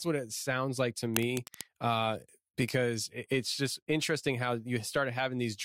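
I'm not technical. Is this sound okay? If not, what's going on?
No. A worn cable or loose connector was likely being moved, so its electrical contact kept flickering. That is cable scratch noise: from 1.14 to 1.66 s, just after "it sounds like to", a rough scratching, rustling burst sits fairly loudly over the speech.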